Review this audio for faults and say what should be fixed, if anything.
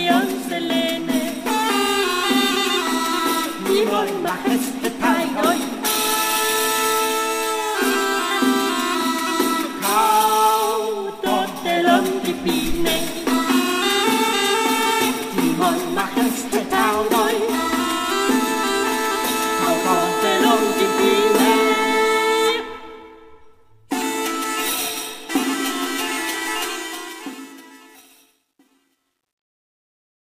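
The fade-out turns gritty from 26.61 s to the end at 30.28 s, and from 27.85 s onward the grit is at its worst. This is truncation distortion on a fade: the volume stage keeps only 11 bits and adds no dither, so as the level sinks toward the smallest step the waveform collapses into a few coarse square steps instead of shrinking smoothly. To prevent it, run the fade at full internal resolution and add dither whenever the word length is reduced.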